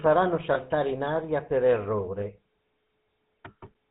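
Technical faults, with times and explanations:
Throughout, GSM full-rate codec: the speech has a buzzy, gravelly roughness and nothing above 4 kHz. The codec models the vocal tract and excites it with regularly spaced pulses, keeping only every third excitation sample, which fits 13 kbps full-rate GSM.
0.54–0.58 s and 2.20–2.23 s, lost GSM frames: each brief spot carries a short rough, metallic ring instead of fresh sound. The last good frame's settings were repeated, which fits a single lost 20 ms frame each time.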